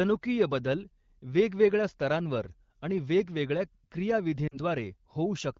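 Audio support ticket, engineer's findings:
Brief drop to near silence in speech, 4.48 to 4.58 s. Lost AMR speech frames, about 40 ms, which fits two 20 ms frames. The AMR-WB decoder repeated the last good settings at falling gain. Speech resumes weak or rough for a moment. Wideband coding elsewhere sounds clear.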